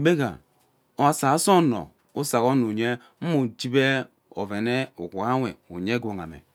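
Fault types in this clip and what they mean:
No technical faults are audible.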